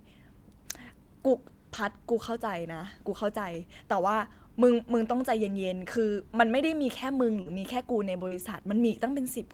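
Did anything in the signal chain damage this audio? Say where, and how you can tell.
Yes. Packets were lost on the network path, and you can hear lost packets rebuilt from error correction at 1.73–1.91 s, 5.41–5.51 s, 7.46–7.52 s and 8.31–8.41 s. These stretches sound rougher and grainier because the decoder played the low-bitrate backup copies carried in the following packets, so nothing drops out.

There's also short concealed packet loss at 7.41 s and 8.28 s, each covering about 40 ms, where the speech briefly smears or wobbles. No backup existed there, so the decoder extended the preceding sound and blended back, running straight into the rebuilt frames that follow.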